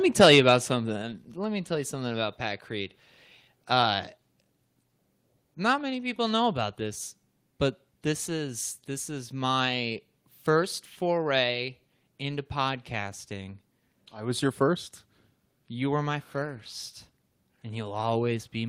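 Microphone volume stepped down at 1.02 s: the speech and the background behind it drop together by about 4 dB in a single abrupt step and stay at the lower level. This is likely the call software cutting the microphone's input volume at once.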